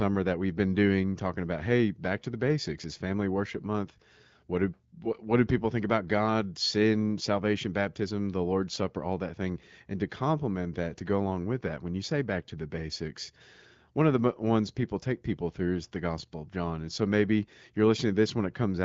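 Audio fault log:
Nothing stood out on listening to this speech, which is carried by the AMR wideband (HD Voice) codec at 12.65 kbit/s.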